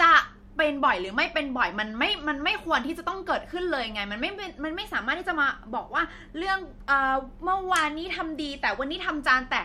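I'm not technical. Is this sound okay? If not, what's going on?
Yes, it's fine; nothing in this recording sounds broken or out of place, so there's nothing to worry about.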